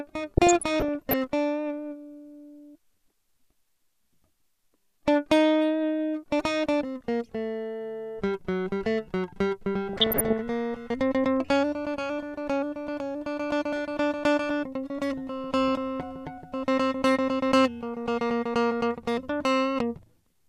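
From 0.37 to 1.16 s, and again from 9.93 to 10.41 s, DAB burbling breaks into the music. Weak reception lets bit errors, well under one percent, past error correction. Wrong samples put short blips of noise into single sub-bands.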